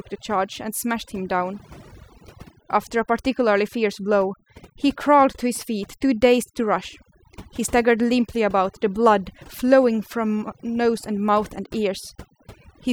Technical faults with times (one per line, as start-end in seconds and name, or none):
0.00-12.92 overdone noise removal